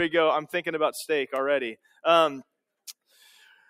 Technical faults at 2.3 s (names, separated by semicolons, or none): none